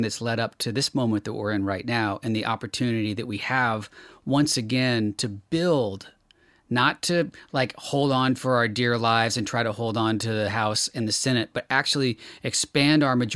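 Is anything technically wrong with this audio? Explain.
No, nothing is technically wrong with this audio.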